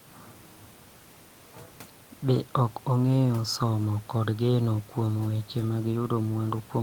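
Nothing technically wrong can be heard in this speech recording. Some room noise from the recording space sits in the background, about 30 dB below the speech.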